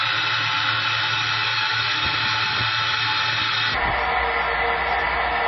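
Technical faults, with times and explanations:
Throughout: MP3 compression, likely the cause of the band-limited, watery sound. Nothing is heard above 5.8 kHz, and weak detail flickers between frames, which fits a very low bitrate around 24 kbps. Unlike a plain low-pass filter, the swirling and chirpy smearing give it away.
0.00–3.75 s: section at the wrong speed. This stretch runs about 1.85 times too fast, so pitch sits close to ten semitones high and everything is hurried, likely from playback against the wrong clock. Timing and pitch rise together, unlike a pitch shift, and they return to normal at 3.75 s.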